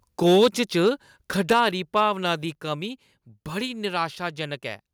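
From 0.25 to 0.89 s the loudest syllables carry a harsh, crackling edge. This is microphone overload, likely from input volume set so high that peaks hit the converter's ceiling, here by about 6 dB. Only a small share of samples is affected, but each one has its top sliced off. On the waveform those peaks show as flat plateaus. On the spectrogram, vertical smears of broadband energy rise above the harmonics.

Inside that stretch, at 0.44 s, voice and background both drop by about 2 dB at once. This is the microphone volume being stepped down, likely by the call software reacting to the clipping. The waveform envelope shows a single clean step, and the spectrogram dims evenly across all frequencies at that instant.

The overload returns from 1.50 to 1.68 s, about 5 dB over, with the same flattened crests and gritty texture. At 1.53 s a second, larger step follows, about 4 dB down, which is likely the same automatic correction, seen again as a sudden uniform drop in level.

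A final brief overload runs from 1.96 to 2.02 s, just before "दी कमी". It is only about 1 dB over.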